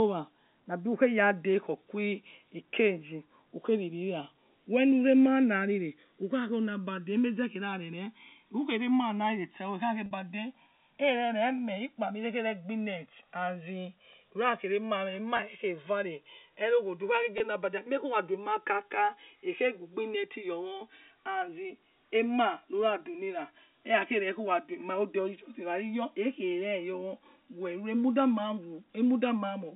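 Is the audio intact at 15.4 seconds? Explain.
No. From 15.37 to 15.39 s there is packet loss with pitch repetition. About 20 ms of audio is missing, which fits two lost packets. The receiver bridges the gap by repeating the last pitch period, so the speech briefly sounds held and slightly buzzy before continuing. The channels drifting apart are also present at this moment. The two channels run on clocks that differ by roughly 150 parts per million, so their relative delay keeps sliding, reaching around 4 ms. When the channels are summed, the moving comb notches produce a slow flanging sweep.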